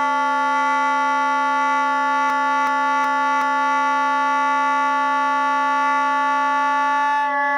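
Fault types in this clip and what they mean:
Repeated frames: A stretch of compressed audio is decoded again. A 0.37 s block stutters, replaying four extra times from 2.30 to 3.79 s, adding 1.49 s.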